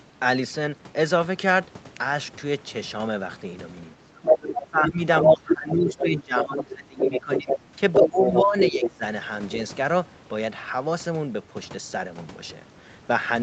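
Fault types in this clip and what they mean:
speech suppressed in double talk: The talker's level caves in whenever a second voice overlaps, briefly around 3.9 to 4.2 s and then across most of 4.6 to 9.0 s, dropping by as much as about 20 dB. The likely cause is an echo canceller that cannot separate the near talker from loudspeaker echo and turns both down. On a waveform the envelope shrinks or breaks into gaps. On a spectrogram the talker's harmonics thin out and fade in patches.
other side's voice leaking through: A second voice sits in the microphone signal in bursts at 4.23 to 4.82, 5.16 to 6.63, 6.98 to 7.59 and 7.92 to 8.90 s, at times about as loud as the talker. The likely cause is loudspeaker playback that the echo canceller did not fully remove. On a spectrogram a separate harmonic stack with its own pitch contour overlaps the talker's. On a waveform these stretches show as extra energy where the talker is suppressed.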